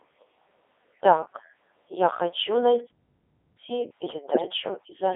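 Codec 2 vocoder throughout: the speech is rebuilt from pitch, voicing and envelope parameters, consistent with its 3.2 kbit/s mode, sounding buzzy and robotic within roughly 250 Hz to 3.5 kHz.

Playback stall from 2.89 to 3.59 s: the sound cuts out mid-flow for about 0.7 s, likely because the player starved for data, then resumes.

Bit errors on digital voice radio from 4.30 to 4.42 s: a few percent of bits flipped across a handful of vocoder frames, making pitch, level and tone jump into warbling gibberish.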